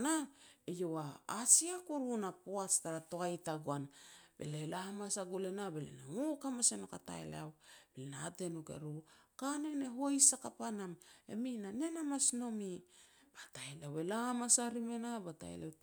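No technical faults can be heard anywhere in this recording of speech: the signal stays steady and intact throughout.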